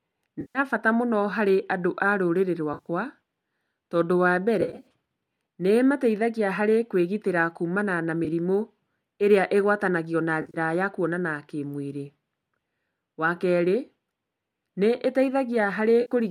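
AAC frame loss with concealment occurs at 0.41–0.59 s, 2.74–2.88 s, 4.61–4.87 s, 8.25–8.28 s, 10.42–10.57 s and 16.01–16.12 s. The decoder fills missing frames, likely 10 ms low-delay AAC-ELD frames, with smeared, phasey copies of the last spectrum, not hard silences or clicks. Those at 2.74, 4.61 and 10.42 s flicker as scattered short runs.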